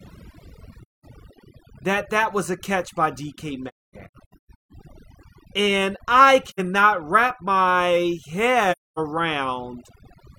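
Overdone noise removal runs through the whole speech clip. The reducer cuts any band near its noise estimate, so the background becomes near silence with twinkling specks. AAC frame loss with muting appears as soft-edged holes where the decoder zeroed lost frames and faded out and back in: 0.82 to 1.05 s; a broken stretch from 3.68 to 4.72 s with the longest gap around 300 ms; 6.47 to 6.60 s, just before "wrap my"; and 8.72 to 8.99 s, right after "wrap my".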